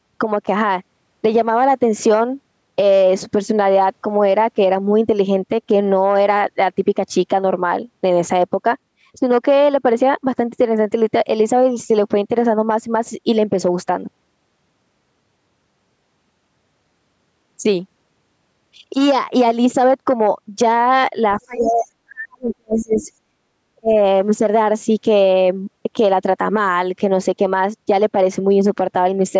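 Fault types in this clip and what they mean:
Speech suppressed in double talk: from 21.39 to 23.1 s and again at 23.75 to 23.93 s, the voice sinks by roughly 40 dB and 30 dB, likely because the echo canceller muted both talkers at once.
Other side's voice leaking through: brief scraps at 21.6 to 21.72 s and 22.95 to 23.04 s, about 15 dB below the speech, likely loudspeaker echo the canceller failed to remove.
Background gated by the echo canceller: at 23.38 to 23.47 s the room sound drops by about 26 dB as the canceller clamps the microphone, then recovers.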